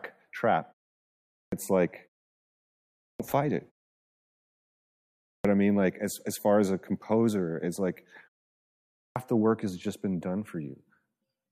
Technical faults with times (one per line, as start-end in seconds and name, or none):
1.35-1.52 clipped start after a pause
3.00-3.20 clipped start after a pause
5.26-5.45 clipped start after a pause
8.96-9.16 clipped start after a pause